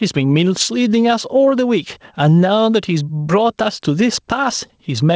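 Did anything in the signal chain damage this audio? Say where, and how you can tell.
Yes. Gain pumping runs throughout: the level ducks around 10 dB under each loud syllable, likely input gain set too high into a fast limiter.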